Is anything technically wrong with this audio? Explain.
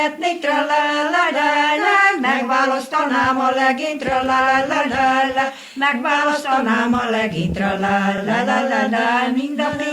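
Yes, there's one glitch. Around 8.18 to 8.21 s you get repeated frames: a 32 ms chunk, about one compressed frame's worth, gets played twice. That's a short stutter, and it stretches the audio by 32 ms.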